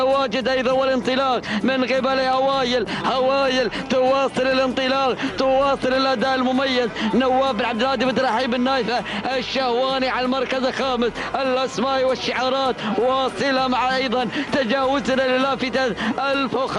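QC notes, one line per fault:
No faults heard anywhere in the clip.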